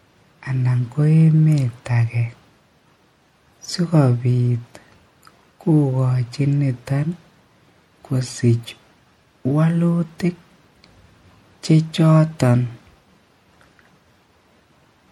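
Throughout the speech there is plainly audible MP3 compression damage, likely from encoding at a low bitrate around 64 kbps. Weak frequency components flicker between frames, giving a watery, swirly texture, and s sounds turn metallic.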